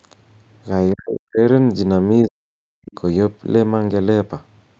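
From 0.93 to 1.41 s the speech falls away sharply, dropping by roughly 40 dB at its deepest, so stretches of the talker vanish or come through in broken fragments. A second, shorter dip of the same depth follows from 2.23 to 2.52 s. This is speech suppressed in double talk, likely because the far end was talking at the same moment. Unable to tell the near talker from the loudspeaker echo, the echo canceller attenuated the whole microphone signal.

At 2.80 to 2.85 s the room sound drops out for about 50 ms, falling by about 34 dB before springing back. This is background gated by the echo canceller. With the loudspeaker active, the canceller clamped the microphone path hard. It released almost immediately, which is why the gap sounds like a brief hole in the ambience rather than a sustained mute.

Straight after the gate, from 2.85 to 2.95 s, a faint scrap of another voice appears, sitting around 20 dB below the main speech. 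This is the other side's voice leaking through, likely as residual loudspeaker echo that the canceller failed to subtract. The whole clip is band-limited at 8 kHz by the call codec path.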